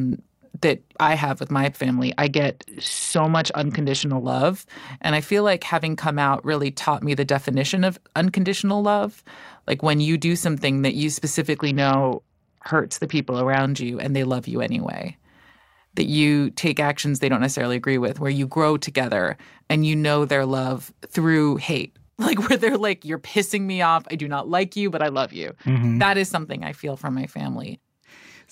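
Bluetooth SBC bit pool drops at 1.94–4.26 s after "I have with my", 11.56–13.62 s after "do something that you", and 24.99–25.83 s after "do not like you". The encoder starves the top sub-bands, leaving dull, gritty speech consistent with a bit pool falling from 31 to about 7.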